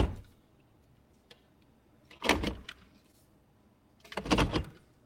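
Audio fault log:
2.17–2.22 s and 3.12–3.15 s: short concealed packet loss. About 20 ms of audio failed to arrive at each point, and the receiver extrapolated from the preceding sound before blending back. This produces a brief smear or wobble.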